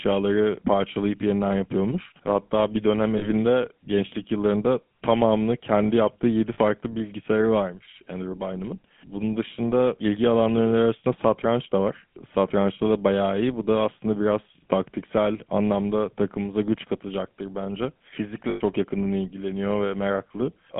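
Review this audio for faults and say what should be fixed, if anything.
The speech has a buzzy, gravelly roughness throughout, with nothing above about 3.4 kHz and a thin low end from about 150 Hz. This is the GSM full-rate codec, plainly audible here. It reproduces the voice with a vocal-tract model driven by a sparse, regularly spaced pulse train, which fits the 13 kbps full-rate mode. The coarse excitation causes the grain, and the telephone line band sets the bandwidth. To prevent it, record or route the call over a wideband path such as AMR-WB, Opus or a direct recording rather than legacy GSM.

Three brief metallic, ringing holds interrupt the speech, and these are lost GSM frames. The first runs from 3.18 to 3.27 s, after "bir dönem" and before "gençlik yıllarında tamamını kendi". The second runs from 6.54 to 6.59 s, just before "bilgisayarı varmış". Both last about 40 ms, which fits two dropped 20 ms frames. 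The longest, about 100 ms, runs from 18.5 to 18.61 s after "takımımıza güç katacaktır bence". In each case the decoder repeated the last good frame's parameters, smearing a frozen tone over the gap. To prevent it, improve the radio link or transport and add error protection or retransmission so that frames arrive intact.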